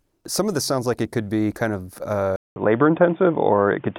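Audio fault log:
2.36–3.98 s, input switched to a poorer device: right after "could be kind of" there's a gap of about 200 ms, then the speech comes back dull and boxy, with nothing above 3.6 kHz, a few dB different in level, and a faint new noise floor well below the speech. That's likely the input jumping to another mic or a headset's call profile, whose narrower band and own noise carry through to the end.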